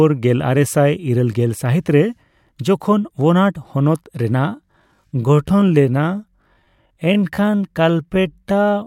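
At 4.35 s the speech suddenly slows to about 0.66 times its pace and stays slow until the end at 8.87 s. The pitch does not drop with it. That is the mark of a time-stretched section. Software has likely lengthened this part to fill a set duration, repeating short slices of sound to keep the pitch. The slowed speech sounds drawn out.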